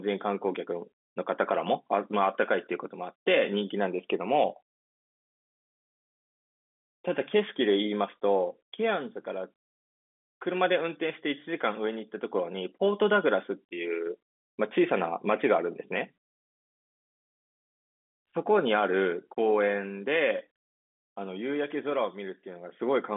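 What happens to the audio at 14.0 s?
Nothing goes wrong at 14.0 s: the speech carries on intact through the telephone-band G.711 coding, which holds the sound to the usual 200 Hz to 3.5 kHz line band.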